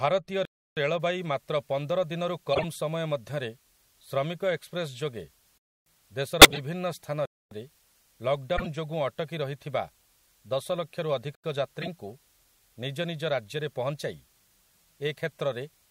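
Speech, recorded or streamed through a chain that fails in three ways. Four times the output buffer went unfilled and zeros were played in its place, producing a block of digital silence: 0.45 to 0.77 s, 5.58 to 5.86 s, 7.26 to 7.51 s, and a shorter 85 ms gap at 11.35 to 11.44 s, which fits a 4096-sample buffer. Because the audio drops to zero and returns with no fade, each gap is a clear hole. From about 1.0 s to the end, the signal was reduced to low bit depth with dither, about 9 bits. Dither added before rounding turns the quantisation error into a steady, even white-noise hiss about 35 dB below the speech. There is no grainy distortion, just a constant noise floor under everything from that point on. Finally, compressed frames with flipped bits were decoded as corrupt frames instead of being concealed. The misread gains and codes put energy at the wrong frequencies, heard as short chirps or noise bursts at 2.53 to 2.64 s (about three frames), 6.42 to 6.58 s (about five frames, the loudest, peaking near -5 dBFS), 8.56 to 8.67 s (about three frames), and 11.82 to 11.88 s (a couple of frames, much quieter, around -20 dBFS).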